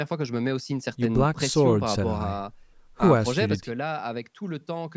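From 3.55 s to the end, the speech drops abruptly by about 6 dB, likely one channel dropping out before the mono sum. Unlike a gain fade, it falls in a single step.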